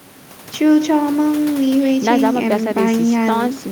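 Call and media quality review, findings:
No faults found.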